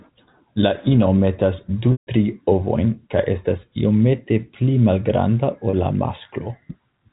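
At 1.92 to 2.07 s, packet loss with pitch repetition: the receiver loops the last pitch period to bridge a roughly 150 ms gap, fading it to silence over about 50 ms before speech cross-fades back. At 5.70 to 5.73 s, a 30 ms gap gives a brief buzzy hold, consistent with a single lost packet.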